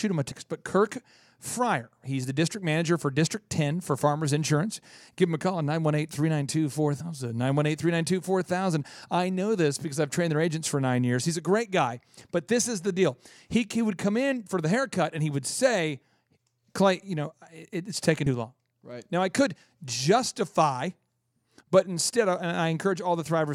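Damaged data in a compressed stream interrupts the speech three times: at 0.30 s just after "him a", at 6.99 s, and at 18.25 s just after "know it it's taken". Each lasts under 20 ms. A stretch of the compressed stream was corrupted, so the decoder misread or rejected those frames and lost sync until it found the next frame header. Each event is heard as a brief chirp, squawk, click or gap. A playback-buffer dropout is plain silence, but these are brief, codec-flavoured disturbances.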